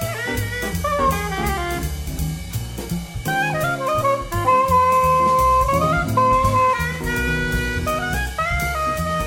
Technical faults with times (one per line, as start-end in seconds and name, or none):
0.31-3.09 mains hum